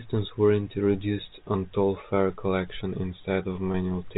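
At 3.72 s the speech briefly holds a slightly buzzy, sustained tone for about 20 ms, until 3.74 s. This is packet loss with pitch repetition: a single lost stretch of audio was bridged by repeating the last pitch period, all within a 4 kHz G.711 telephone band.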